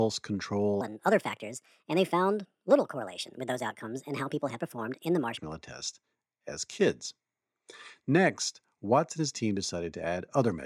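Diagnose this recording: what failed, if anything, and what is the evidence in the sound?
Wrong sample rate at the playback stage: from 0.81 to 5.37 s, just before "test as kids", speech runs 1.38 times fast and about 5.5 semitones high, which fits 32 kHz audio played at 44.1 kHz unconverted. Unlike a pitch shift or time-stretch, speed and pitch move together.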